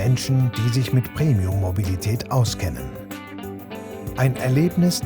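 From 0.80 s to 4.00 s there is a regular click, recurring every 1.07 s for about four events. This pattern points to clock drift buffer slips. The likely cause is two devices running on independent clocks that disagree by roughly 150 ppm, so the buffer between them slowly drifts until a small block of samples, a handful at a time, is dropped or repeated. Each slip breaks the waveform's continuity and produces a short, sharp discontinuity while signal is present.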